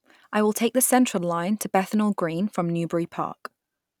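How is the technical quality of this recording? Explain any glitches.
Nothing stood out as a technical problem when listening through the recording.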